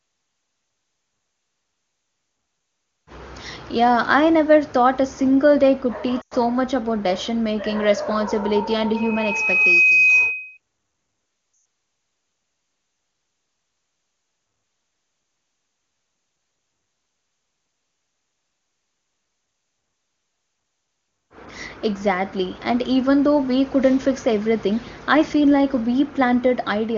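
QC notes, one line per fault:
6.21 to 6.34 s and 11.53 to 11.65 s, lost AMR speech frames: the audio smears and drops out for 100 ms and then 120 ms, which fits runs of five and six 20 ms frames. The decoder keeps repeating the last good frame with falling gain, so the sound stretches briefly, fades quickly, and comes back a little rough.
8.96 to 10.58 s, loudspeaker feedback squeal: a steady 2.5 kHz tone swells over roughly a second to about 5 dB above the speech. The microphone is picking up its own loudspeaker, and at that frequency the loop gain exceeds one, so the tone keeps feeding itself. It sits within the wideband speech band.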